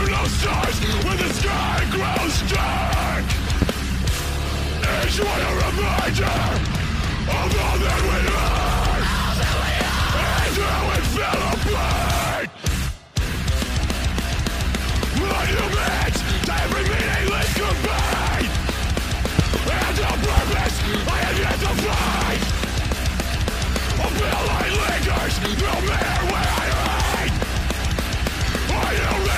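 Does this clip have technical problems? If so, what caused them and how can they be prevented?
Yes. Loud pops occur at 3.62–3.65 s, as a double pop between 19.39 and 19.59 s, and at 20.37–20.40 s, each about 15 dB above the surrounding audio while the sound continues underneath. A sudden voltage step or pulse, likely from a connector being disturbed, a switch, a static discharge or a driver glitch, entered the signal path. Downstream circuitry shaped each pulse into a short thump. Secure the cables, switch equipment only while muted, and control static near the gear.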